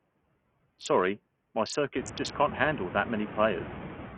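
A short speech recording runs through a noise suppressor from start to finish. Room noise sits behind the voice and rises at around 2 s. The suppressor pulls that noise down by about 15 dB in the gaps, then lets it back up under each phrase. The result pumps between the words. The treble is gone. Nothing is heard above 9.2 kHz. The top end that remains flickers, and a gritty, aliased roughness clings to the voice throughout. The likely cause is heavy Bluetooth SBC compression. At a small bit pool, SBC starves its highest sub-bands of bits and coarsely quantises the rest. The damage here fits a low bitrate of about 48 kbps.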